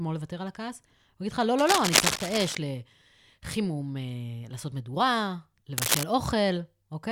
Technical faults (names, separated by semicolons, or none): cable scratch noise